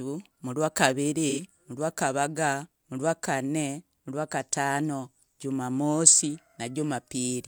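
A speech clip with one instance of AAC frame loss with concealment, running from 1.29 to 1.43 s. For about 85 ms the decoder has no real data and rebuilds the sound from the last good spectrum, which fits two lost AAC frames. The patch sounds smeared and noisy or phasey rather than silent. On a spectrogram the harmonic detail blurs into a flat, held smear. On the waveform the cycles turn irregular and noise-like.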